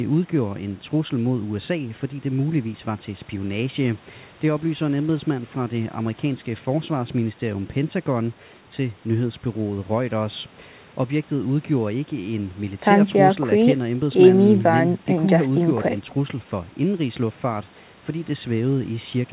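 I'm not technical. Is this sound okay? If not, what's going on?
Yes, there's nothing wrong with this speech recording. It sounds like an ordinary phone call, because the call connection it went through keeps nothing above 4 kHz, which gives the slightly narrow, muffled tone of a normal phone line.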